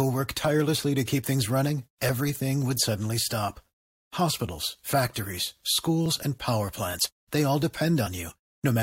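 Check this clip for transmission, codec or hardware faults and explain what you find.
One transmission fault turns up in this speech. At 6.06 s, just before "and power plants they", there's an overlap between stream segments. Two segments' timestamps collided, the player trimmed roughly 12 ms of real audio, and the waveform jumps, giving a tiny skip.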